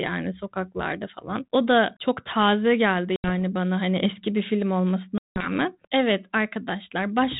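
Packet loss on an ADPCM call drops 80 ms at 3.16 s, after "da çok taze geldi", and 180 ms at 5.18 s, after "hani eski bir film", which points to about four and ten lost packets. Each hard-edged silent hole leaves the 32 kbit/s G.726 decoder's predictor mismatched, so speech resumes with brief distortion.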